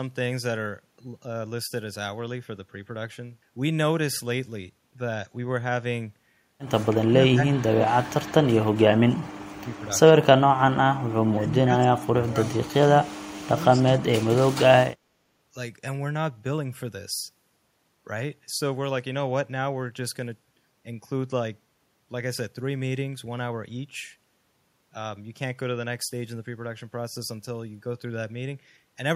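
The speech drops out in patches between 6.9 and 14.8 s. The gaps fall at 6.92–8.59, 9.47–10.12, 10.91–11.17, 11.33–12.98 and 13.44–14.79 s. Level falls sharply, by roughly 25 to 40 dB at the deepest points. Some stretches vanish almost entirely. This is speech suppressed in double talk, likely from an echo canceller that mistook the talker for loudspeaker echo while the far side spoke. It then turned everything down.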